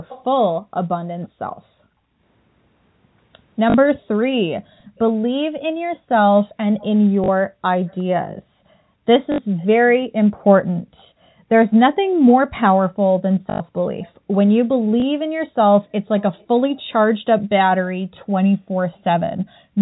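Echo leak from 0.08 to 1.28 s: a faint delayed copy of the speech trails the original by about 0.36 s, roughly 20 dB down. It is likely that the far end used a loudspeaker and its echo canceller let part of the pickup return down the line.

Background gated by the echo canceller from 1.52 to 4.96 s: the room sound drops out briefly, by up to about 40 dB, for around half a second in total. The canceller clamped the microphone hard while the loudspeaker played, then released it.

Packet loss with last packet repeated at 3.70 to 3.74 s (40 ms): the receiver replayed the final packet that arrived to fill the gap. The stretch buzzes at about 50 Hz, which fits 20 ms packets. It sounds like a brief robotic stutter.

The echo leak returns from 4.79 to 16.82 s, at about 0.36 s delay and roughly 25 dB down. Further repeated-packet stutters occur at 7.24 to 7.28 s (40 ms) and 9.32 to 9.38 s (60 ms). 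Gating of the background returns from 10.79 to 12.26 s, again dipping up to about 40 dB for roughly 0.7 s in total. The longest stutter, 13.5 to 13.6 s (100 ms), is followed by a small blip from a single repeated packet at 15.00 to 15.02 s (20 ms).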